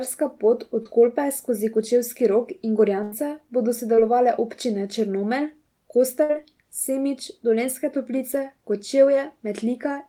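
A speech recording with two kinds of network damage. Short concealed packet loss shows up at 0.83–0.87 s and 3.95–3.99 s. In each spot about 20 ms of audio never arrived, and the receiver covered the hole by extending the preceding sound for roughly 17–18 ms before crossfading back. The result is a brief smear or wobble rather than an audible break, and it is too short for the patch to fade or buzz. A burst of packet loss is more disruptive, at 3.03–3.13 s (about 80 ms missing) and 6.23–6.31 s (about 60 ms missing). Here the concealment has to stretch the last sound across the whole gap while turning it down, so a held buzz or fading hiss is heard, and the speech then picks up further along with that stretch gone. The length of the patch and its audible decay separate these bursts from the short losses.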